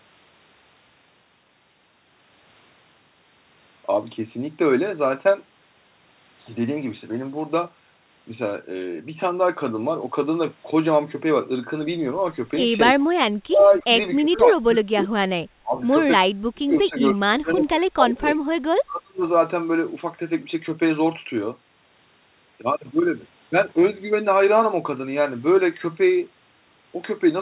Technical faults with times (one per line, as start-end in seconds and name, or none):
13.47-13.65 speech suppressed in double talk
13.58-13.78 echo leak
14.19-15.13 speech suppressed in double talk
15.60-15.75 speech suppressed in double talk
16.49-18.38 speech suppressed in double talk
18.86-19.24 speech suppressed in double talk